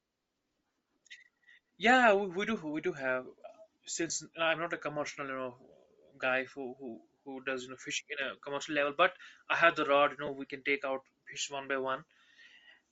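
The speech runs through what is likely Bluetooth LC3 compression at a low rate, consistent with 7.5 ms frames near 32 kbps, leaving a plainly audible breathy, grainy upper band throughout. Lost LE Audio frames force the decoder to repeat scrambled spectra, producing brief concealed losses at 0.67–0.69 s, 4.08–4.10 s just before "I'm not a commercial", and 10.26–10.29 s.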